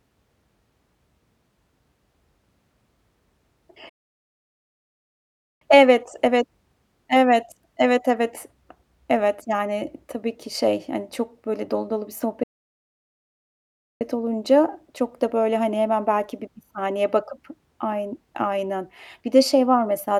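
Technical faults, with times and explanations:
3.89–5.61 s and 12.43–14.01 s, playback stall: the speech cuts out mid-flow and falls completely silent, first for about 1.7 s and then for about 1.6 s after "böyle dolu dolu bir", picking up again at "olunca çok da böyle". The silence is a hard gap rather than a fade. This is likely the player running dry of buffered data, or its audio thread being blocked, so nothing reaches the output until it recovers.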